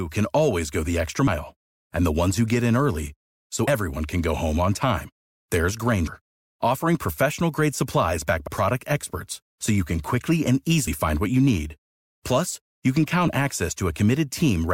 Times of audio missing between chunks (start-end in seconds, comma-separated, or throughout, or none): 3.67, 6.07, 8.47, 10.87